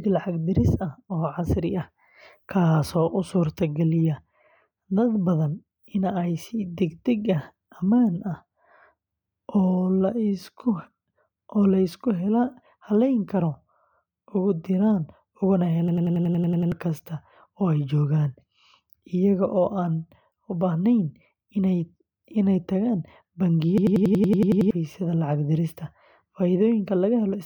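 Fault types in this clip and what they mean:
System hang loop: at 15.88–16.72 s after "diraan ugana" and 23.78–24.71 s, a frozen system replays one 93 ms buffer chunk, a 10.8 Hz machine-gun stutter that fits 4096 samples.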